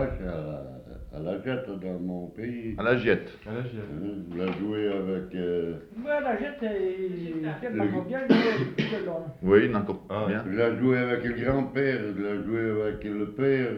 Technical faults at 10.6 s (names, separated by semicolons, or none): none